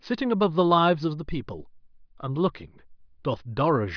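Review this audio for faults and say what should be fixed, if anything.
Nothing in this speech recording needs fixing. No faults can be heard at any point, so there is nothing to correct or prevent.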